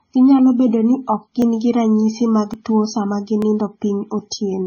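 From start to finish the speech shows signs of transcoding between lossy codecs. The top end stops at the lowest cut-off in the chain, and two layers of coding damage are heard together: a smeared, swirly texture typical of a very low-rate MP3 stage, overlaid with a second codec's own artefacts. The sound points to a roughly 16 kbit/s MP3 that was likely re-encoded to WMA at a higher rate, which kept the first stage's band limit and damage rather than restoring anything.

At 1.42 s, 2.54 s and 3.42 s there are dropped samples. Each is a single sharp click, seen as a thin vertical line running up the spectrum. In each case the waveform jumps straight from one value to a later one because well under a millisecond of samples is missing, likely from a momentary gap in the capture or playback stream. The loss is far too brief to remove any audible sound.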